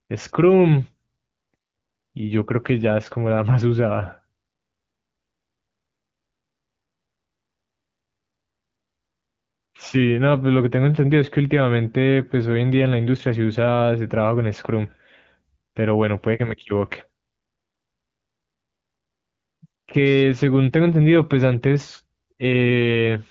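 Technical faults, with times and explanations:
No technical faults detected.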